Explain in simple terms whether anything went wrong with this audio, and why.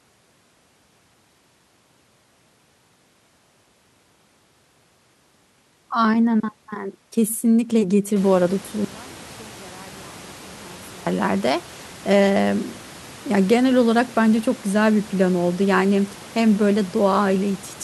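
From 8.85 to 11.06 seconds the speech almost disappears, leaving only a faint remnant. The likely cause is one channel inverted: one side of a stereo recording was flipped, so the two sides cancel when combined into one. The room's own background noise grows louder from about 8 seconds, but that is part of the recording, not a fault.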